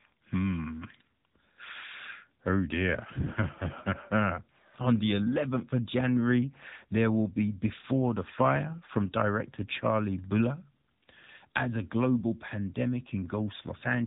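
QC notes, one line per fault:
Throughout, AMR narrowband mobile codec: the speech passed through the AMR-NB mobile codec at one of its lower modes, consistent with roughly 8 kbps. The signal was held to 8 kHz sampling and rebuilt from a vocal-tract model fed with only a few pulses every 5 ms. Nothing above 3.8 kHz survives, so sibilants and breath detail are gone, and the sparse pulse excitation gives the voice a plainly audible buzzy, synthetic edge.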